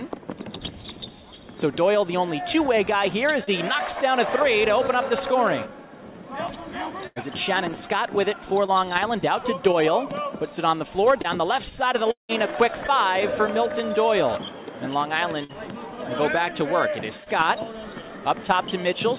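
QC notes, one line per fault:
3.44–3.50 s and 17.24–17.29 s, short concealed packet loss: about 30 ms of audio failed to arrive in time at each point. The receiver extrapolated the preceding sound to cover roughly 28 ms and 23 ms respectively, then crossfaded back into the real signal. The result is a brief smear or wobble rather than silence. The bandwidth stops at 4 kHz, which fits a G.711 mu-law path.
7.07–12.32 s, scattered short gaps: about four separate losses spread across this five-second stretch, totalling 330 ms of missing audio, with the longest hole around 200 ms. Each was patched by continuing the last sound, roughly 300 ms concealed overall, about 7% of the span. The timeline also gains about 16 ms. The audio stays mostly clear but carries intermittent hiccups and smeared instants.
15.44–15.52 s, burst of packet loss: about 60 ms was lost in one run. Concealment filled about 52 ms by repeating the preceding sound while attenuating it, so a pitched sound turns into a short held buzz and other sounds into a decaying hiss. 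Playback then resumes further along, with the missing stretch simply absent.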